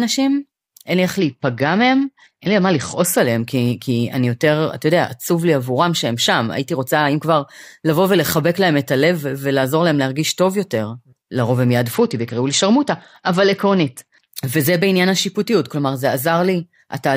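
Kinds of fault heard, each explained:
Bluetooth SBC bit pool drop: from 1.18 to 3.18 s and 11.94 to 14.28 s the encoder, short of bits, starves the top sub-bands, so speech dulls and turns gritty, fitting a fall near 72 kbps; unlike a dropout, sound continues, then recovers.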